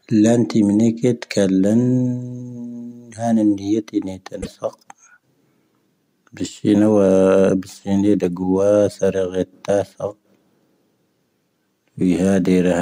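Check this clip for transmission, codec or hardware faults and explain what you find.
One fault appears in this speech clip. From 4.38 to 4.47 s, damaged data in a compressed stream makes the decoder misread frames and resync, producing a brief glitch.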